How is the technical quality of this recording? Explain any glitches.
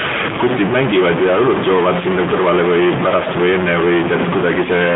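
Poor: two faults run through the whole speech clip.

Stuck bit: a data line likely stuck in one state offsets about half the samples, giving grainy or buzzy distortion throughout and a hiss filling the pauses.

AMR narrowband mobile codec: the speech was squeezed through the 2G/3G vocal-tract coder, its buzzy, synthetic texture fitting roughly a 10.2 kbps mode, passing only 150 Hz to 3.6 kHz, with nothing above 3.8 kHz.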